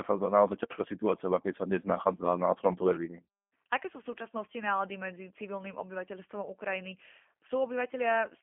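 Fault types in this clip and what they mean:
G.729 codec: speech rebuilt at 8 kbit/s from a vocal tract filter and sparse pulses, nothing above 3.5 kHz, plainly rough and synthetic throughout.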